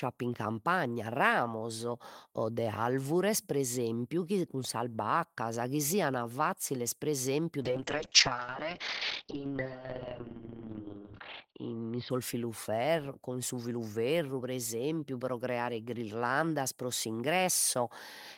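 After "fazziles pre esempiu", from 7.62 to 12.41 s, a call bitrate drop, consistent with roughly 32 falling to 7 kbps, leaves the speech rough and muffled above 6 kHz. Unlike a dropout, it never goes silent.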